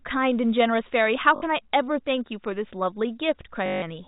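Packet loss with last packet repeated occurs at 1.36 s (60 ms) and 3.66 to 3.82 s. Replayed 20 ms packets buzz at 50 Hz, a robotic stutter.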